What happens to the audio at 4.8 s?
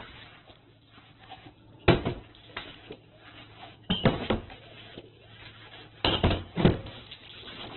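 At 4.8 s, as through the whole clip, the sound has likely been squeezed by heavy Opus compression at a very low rate, perhaps near 8 kbps. It is cut to narrowband, with nothing above 4.2 kHz, and the thin remaining bands are filled in, leaving it rough, grainy and noisy.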